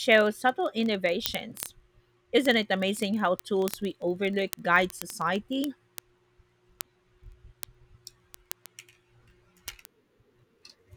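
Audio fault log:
0.12 to 10.96 s, word clock ticks: Sharp ticks run under the speech at a steady rate, roughly every 30 ms, hundreds in all. The receiving device runs on its own clock, around 700 ppm off the sender's. Each slip drops or repeats one sample.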